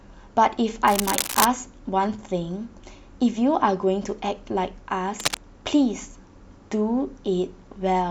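A worn cable or connector likely being moved causes cable scratch noise from 0.87 to 1.45 s and 5.19 to 5.37 s: harsh rustling bursts only about 5 dB below the speech.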